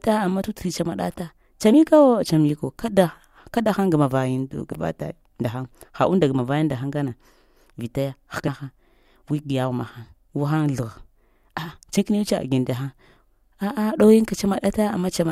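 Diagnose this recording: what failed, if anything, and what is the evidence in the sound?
Compressed frames were skipped at the codec stage. The speech jumps ahead at 0.40, 1.73, 4.71, 8.47 and 11.97 s. Each jump loses roughly 40 to 150 ms, which fits whole 21.3 ms frames.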